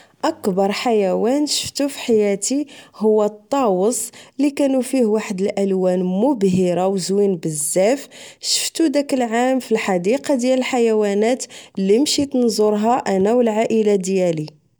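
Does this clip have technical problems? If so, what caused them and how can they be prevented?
No, this clip has no technical problems, so there is nothing that needs preventing.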